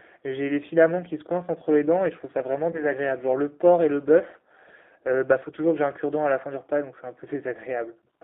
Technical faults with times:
0.00-8.24 G.729 codec
2.72-2.86 VoIP packet loss concealed by the speech codec

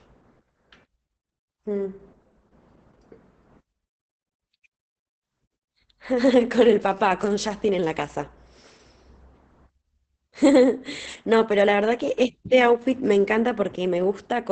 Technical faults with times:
0.00-14.52 Opus voice compression

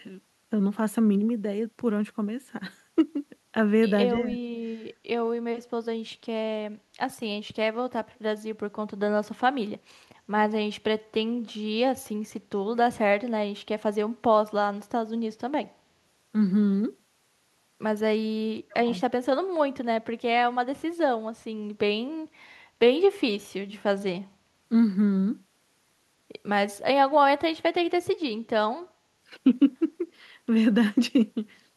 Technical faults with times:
4.28-4.38 speech suppressed in double talk
4.90-4.95 echo leak
8.15-8.19 echo leak
18.68-18.88 speech suppressed in double talk

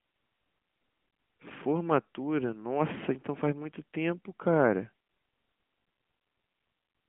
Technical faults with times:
none

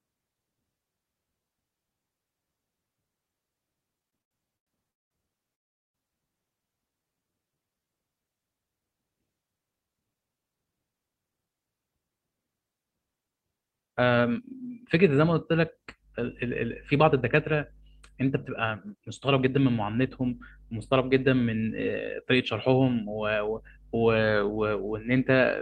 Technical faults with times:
3.99-5.13 repeated stalls (stutter)
5.55-5.96 call audio freeze
6.91-7.86 jitter buffer slow-down
16.93-19.71 jitter buffer speed-up

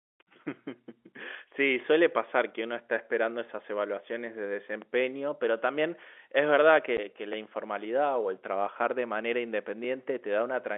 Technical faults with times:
2.31 overlapping chunks
4.82 overlapping chunks
6.97 packet loss filled with silence
7.33 overlapping chunks

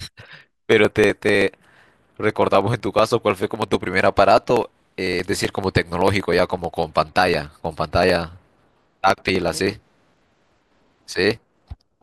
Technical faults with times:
0.09-11.94 periodic USB or driver dropouts

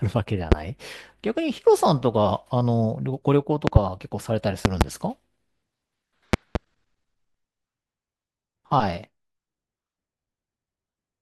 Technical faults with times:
0.52-0.55 loud pop
3.67-3.79 loud pop
4.65-4.84 loud pop
6.33-6.58 loud pop

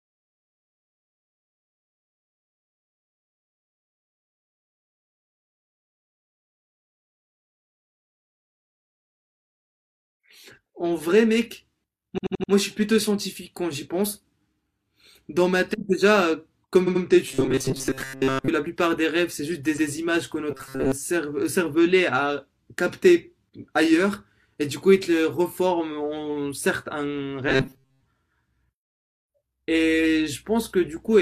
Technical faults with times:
12.14-12.48 repeated frames
16.83-17.00 repeated frames
17.28-18.49 robotic sound from repeated short buffers
19.73-19.86 repeated frames
20.51-20.92 robotic sound from repeated short buffers
27.49-28.07 robotic sound from repeated short buffers

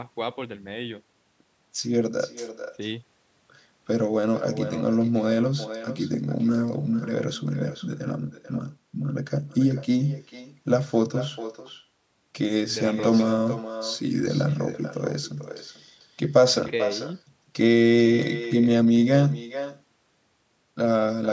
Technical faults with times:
0.00-21.32 echo with no canceller

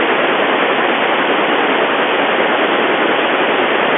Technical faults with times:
none

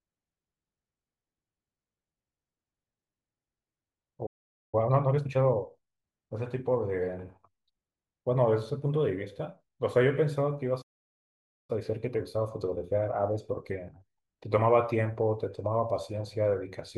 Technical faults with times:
4.26-4.75 playback stall
4.75-5.67 time-compressed catch-up
10.81-11.70 playback stall
11.70-14.70 time-compressed catch-up

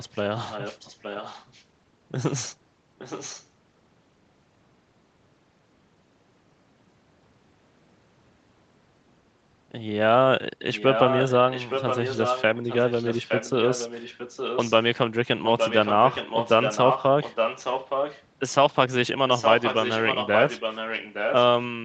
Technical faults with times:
0.36-1.64 echo leak
2.98-3.46 echo leak
10.60-14.73 echo leak
15.44-18.24 echo leak
19.29-21.36 echo leak

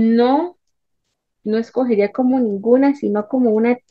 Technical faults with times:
2.33-3.90 drift correction step

